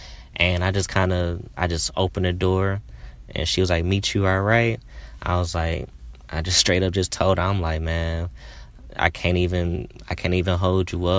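No technical faults are audible anywhere in the speech, so there is nothing to log.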